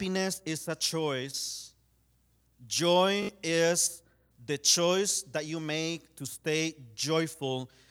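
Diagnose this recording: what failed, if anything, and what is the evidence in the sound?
The failure is at the wireless link: a Bluetooth stutter from 3.23 to 3.29 s, just before "is the choice that". Packets arrived late or not at all, so the receiver kept replaying its last short buffer. That gives a brief buzzing, machine-gun repeat lasting about 61 ms, which fits roughly three lost packets. Speech then resumes further on, as if it had kept playing. A silent dropout or a smoothed-over packet-loss gap would not repeat a slice like this.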